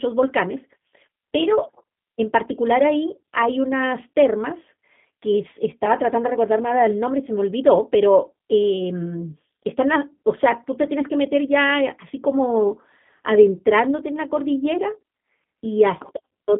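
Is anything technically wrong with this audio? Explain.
Yes. Throughout, the speech carries G.729 codec damage. The band runs about 150 Hz to 3.5 kHz, fitting 8 kbit/s G.729A. It rebuilds speech from a filter and pulses, so it sounds rough and synthetic.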